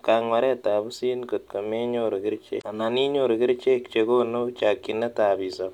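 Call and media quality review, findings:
Damaged data in a compressed stream, 2.58–2.64 s: brief glitch breaking the speech. Probable component is the decoder input. Corrupted bytes make the decoder misread frames, lose sync and hunt for the next valid frame header.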